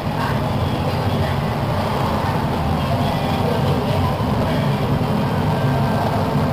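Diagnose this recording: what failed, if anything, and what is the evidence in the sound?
The converter failed: sample clock jitter runs throughout. A hiss-like roughness rides on loud, bright passages and drops away in the pauses, sitting roughly 25 dB below the signal, which fits timing wobble of around 10 microseconds. Unlike a steady noise floor, it follows the waveform's slope.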